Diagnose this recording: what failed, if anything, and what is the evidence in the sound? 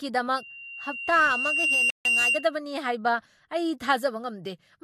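The codec stage shows a muddle of two different compression textures throughout, with no content above 14 kHz. Layered smearing and swirl, rather than one codec's single signature, point to an MP3 at around 96 kbit/s likely re-encoded to Vorbis at around 56 kbit/s. This is transcoding between lossy codecs.

Loudspeaker feedback squeal from the analogue acoustic path runs from 0.37 s to 2.56 s. A 2.8 kHz tone swells over about one and a half seconds to roughly 5 dB above the speech. The microphone is re-amplifying its own loudspeaker. A steady interference tone would not grow like this.

A playback stall at the buffer stage silences the speech mid-flow from 1.90 s to 2.05 s, about 150 ms. That is likely the player running dry or its thread blocking.

Time-compressed catch-up at the playback stage follows at once, from 2.05 s to 2.35 s. The speech runs about 1.5 times fast at unchanged pitch, as spliced, cross-faded fragments drain the backlog. 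A resampling speed-up would raise the pitch instead.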